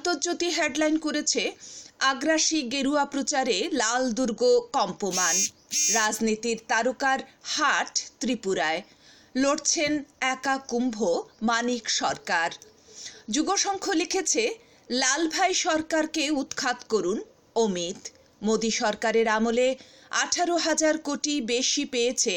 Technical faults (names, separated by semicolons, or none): none